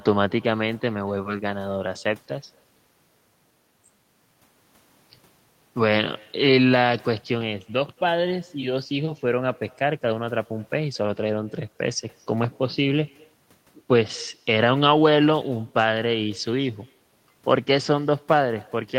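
Echo with no canceller runs throughout: the far end's loudspeaker feeds its microphone unremoved, returning every phrase about a fifth of a second later, faint and thin, roughly 29 dB down.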